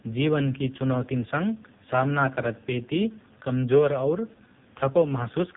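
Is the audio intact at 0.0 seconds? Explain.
No. From 0.0 s the speech already sounds buzzy, thin and synthetic, with nothing above about 3.8 kHz, and this persists across the whole clip. This is the AMR narrowband mobile codec at heavy damage. The narrowband codec rebuilds each 20 ms frame from a vocal-tract model fed by only a few pulses, discarding the upper band. The coarse, robotic texture fits a very low bitrate, around 5 kbps.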